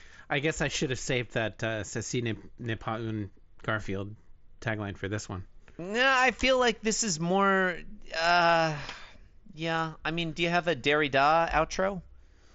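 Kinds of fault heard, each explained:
No faults are heard.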